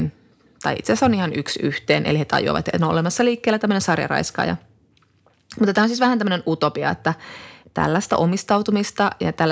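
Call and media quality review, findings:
No faults found; call microphone processing behaving as expected.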